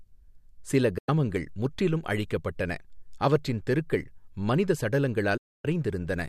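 At 0.98 s the speech fades out in about 8 ms and falls silent until 1.09 s, just before "முற்றிலும் அழிக்கப்பட்டன அவற்றின் தெருக்கள்". A longer hole follows from 5.37 to 5.65 s. Both gaps are digital broadcast dropout, where the receiver muted on bad frames, and the sound sent during them is gone.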